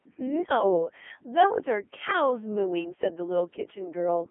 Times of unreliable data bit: none

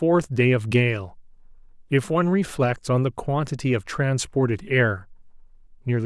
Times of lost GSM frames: none

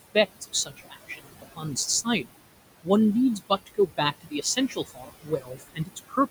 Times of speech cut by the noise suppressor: 0.41-1.77, 2.04-2.43, 3.37-6.18

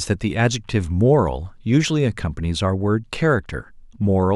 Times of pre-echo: none

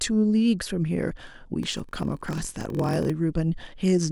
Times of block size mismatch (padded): 1.61-3.11

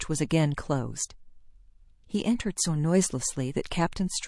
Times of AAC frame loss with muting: none

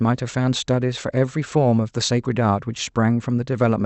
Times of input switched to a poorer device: none

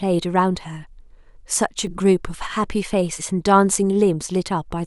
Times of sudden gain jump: 1.87-1.98

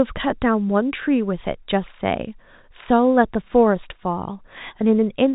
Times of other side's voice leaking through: none

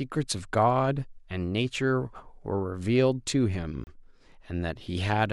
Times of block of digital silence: 3.84-3.87

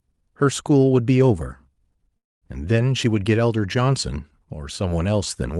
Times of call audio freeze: 2.17-2.44

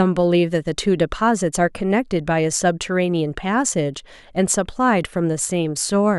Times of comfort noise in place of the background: none

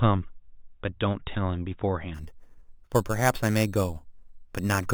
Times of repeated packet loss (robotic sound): none

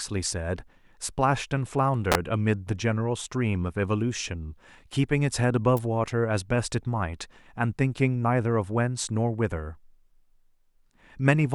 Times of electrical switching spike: 2.12-2.15, 5.77

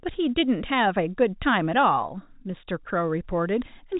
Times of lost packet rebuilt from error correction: none

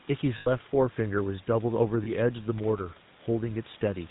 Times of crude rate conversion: none

